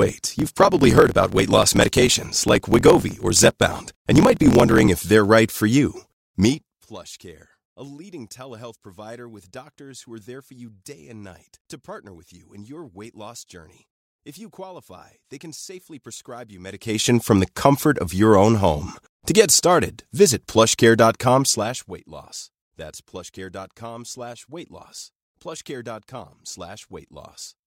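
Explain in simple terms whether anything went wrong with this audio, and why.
Something did go wrong at the very start. From 0 to 4.88 s there is a block size mismatch (truncated): one stage hands over longer chunks of sound than the next stage takes in, so the tail of every chunk is dropped. You hear a low buzz at about 43.1 Hz, which fits a 1024-sample block being read. The speech runs 1.12 times too fast but keeps its usual tone. A simple speed-up would raise the pitch.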